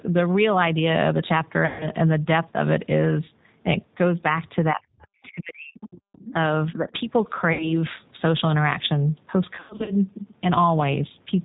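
The whole recording carries the sound of the G.729 codec. The speech is intelligible but has a rough, slightly synthetic grain, which fits its 8 kbit/s rate. The codec rebuilds each 10 ms frame from a vocal tract filter, a pitch predictor and a handful of pulses rather than from the waveform itself. On a spectrogram the energy stops at 4 kHz.

From 1.66 to 1.89 s, VoIP packet loss concealed by the speech codec takes over. About 140 ms of audio never arrived, so the decoder repeated its last pitch and filter and lowered the gain frame by frame. The gap sounds stretched and fades away. The spectrogram shows flat, smeared harmonics in place of normal speech movement. The same happens from 7.53 to 7.72 s, where about 60 ms was lost. From 9.56 to 9.95 s, about 200 ms is lost in pieces scattered over roughly 320 ms, the longest run about 100 ms. Each time, the speech stays weak for a short while after the losses end, because every frame builds on the one before.

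Between 4.72 and 5.78 s the speech dips and breaks up for about a second in total, falling by around 40 dB at its deepest. At 6.33 s there is a brief dip of about 5 dB. This is speech suppressed in double talk. The likely cause is that the echo canceller could not separate this talker from the loudspeaker echo while both sides spoke, so it turned both down. In the waveform the envelope collapses in chunks.

The other side's voice leaks through twice. The first time is a faint scrap at 5.23 s, about 35 dB below the main speech. The second is a longer stretch from 5.80 to 6.33 s, about 20 dB down. This is most probably residual echo the canceller failed to remove. On the spectrogram it shows as weak, broken harmonic traces that do not belong to the main talker.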